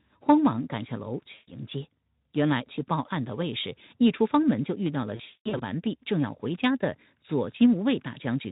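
Packets drop twice, and the VoIP packet loss concealment in the speech codec extrapolates from its last pitch and filter. From 1.33 to 1.57 s, and scattered from 5.15 to 5.62 s (longest run 200 ms), the sound smears into a buzzy, fading tone.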